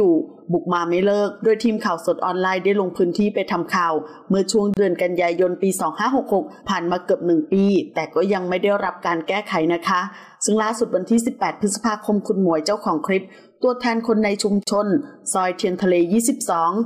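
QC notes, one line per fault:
4.74 s and 14.63 s, gap at a join of encoded pieces: silences of about 30 ms and 34 ms cut into continuous sound, with smeared edges. Separately encoded pieces were joined untrimmed, so encoder start delay and last-frame padding remain before the sound resumes where it stopped.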